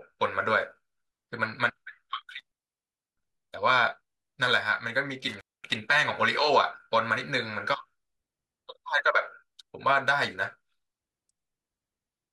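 Speech with an intermittent contact, a loose connection briefly opening, at 2.39–3.28 s (0.66 s open) and 5.29–5.76 s (0.23 s open). Each dropout shows crackle spikes framing a near-flat, faintly hissy gap on the waveform and spectrogram.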